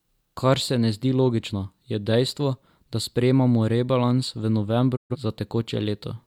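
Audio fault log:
4.95–5.16 s digital broadcast dropout: speech fades to silence within 20 ms, then returns; the receiver muted over failed frames, which fits about three being lost.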